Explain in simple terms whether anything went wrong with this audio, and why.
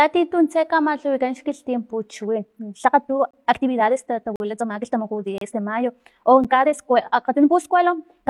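Time-stretched section, from 2.24 s to the end: the speech suddenly runs about 1.5 times faster while its pitch stays the same, so it sounds rushed. The likely cause is software squeezing this part to fit a shorter length. To keep the pitch from rising, it throws away many tiny slices of sound and joins the rest back together, which produces that hurried quality.

Gaps between stream segments, at 3.31 to 3.34 s, 4.36 to 4.40 s, 5.38 to 5.41 s, and at 6.44 s: short, hard-edged holes of silence lasting about 28, 42, 31 and 8.5 ms. They arrive roughly once a second, which suggests the audio was delivered in 1-second chunks whose timing didn't quite line up. The player filled each small mismatch with silence, so a dropout is heard but no sound is actually missing.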